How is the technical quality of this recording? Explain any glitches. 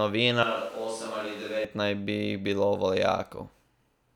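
The recording has one clear glitch, early in the clip. From 0.43 to 1.65 s, the speech jumps to a distant microphone. The close microphone's signal likely dropped out, leaving a mic further from the talker. At that distance the room reflections arrive nearly as strong as the direct sound. The speech turns hollow and roomy, with thinner bass. The level falls by about 5 dB. Background noise rises to roughly 20 dB below the speech. Both changes happen abruptly, at the start and at the end.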